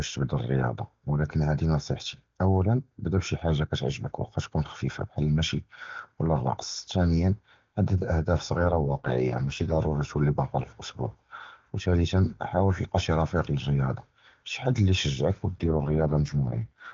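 From 8.57 to 9.80 s, and again from 15.57 s to the end, the network appears to force an AMR rate drop: the AMR-WB link steps down from a rate that fits 23.85 kbit/s to one that fits 6.6 kbit/s, giving up speech detail for error protection. The band and continuity hold, with no gap, but during both stretches the speech turns rough, raspy and synthetic, then clears when the higher rate returns after the first.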